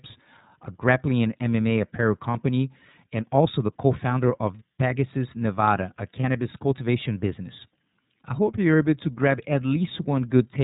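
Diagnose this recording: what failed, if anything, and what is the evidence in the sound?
The codec stage is the cause of the sound heard throughout: the speech passed through the iLBC codec. Nothing above 4 kHz survives. The frame-by-frame excitation coding gives the voice a plainly audible rough, slightly synthetic edge, which fits the 13.33 kbps mode with 30 ms frames.

At the network stage, lost iLBC frames leave two 30 ms gaps, at 2.31 s and at 6.21 s, just before "cultivation business I hope". The decoder fills each gap by repeating the last pitch cycle mixed with noise, heard as a brief buzzy held vowel. Because iLBC frames decode independently, the voice recovers immediately.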